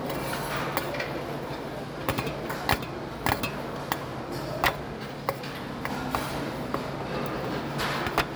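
No technical faults are present in the audio.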